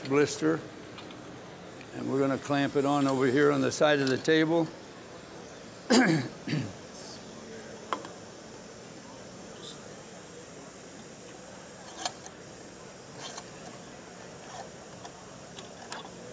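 No technical faults are audible anywhere in the audio.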